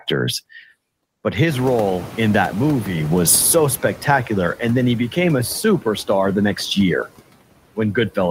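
Right from the start you get noise suppressor artifacts: background pulled down about 17 dB frame by frame, so it dips between phrases and swells under the speech. Around 1.5 s the room noise jumps by about 24 dB, and you hear the noise suppressor catching up. Its estimate lags, so at first the noise gets only about 7 dB of cut, then it settles over those 2.46 s until 3.96 s.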